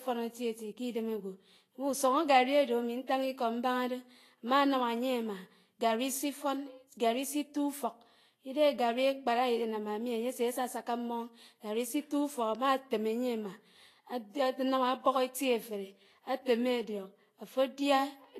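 Throughout the speech, the treble is hissy and grainy, with roughened tones and smeared consonant attacks, likely from Vorbis compression at a low bitrate, roughly what 33 kbps would give. A spectrogram shows nothing above 14.2 kHz and noisy, speckled upper bands.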